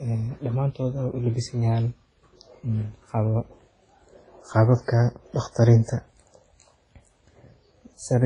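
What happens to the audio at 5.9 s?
Around 5.9 s the speech sounds ringing and washy, with a hiss that swells and fades with each syllable and nothing above 10.4 kHz. This runs through the whole clip and is likely heavy WMA compression at a low bitrate, near 24 kbps: long transform blocks smear quantisation noise over tens of milliseconds, and weak high components are zeroed.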